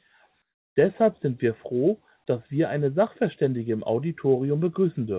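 From 0.42 to 0.76 s, the real background gives way to a steady, featureless hiss about 17 dB quieter, likely comfort noise in place of the background from discontinuous transmission. On a spectrogram, that 340 ms stretch is a smooth, uniform band, and the waveform shows a clear step down.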